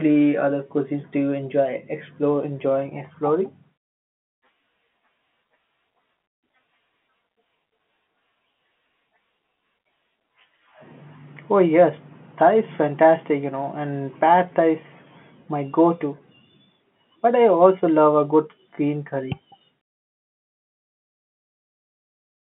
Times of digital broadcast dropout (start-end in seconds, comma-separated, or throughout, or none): none